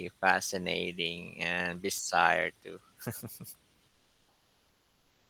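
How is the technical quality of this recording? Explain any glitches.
There is one glitch, comfort noise in place of the background. From 3.88 s to the end, about 1.4 s, the real room noise disappears. A steady, featureless hiss replaces it, about 7 dB quieter. The sender likely stopped transmitting during the pause, as Opus DTX does. The receiver then synthesised rough filler noise. The room noise before this point sits about 40 dB below the speech.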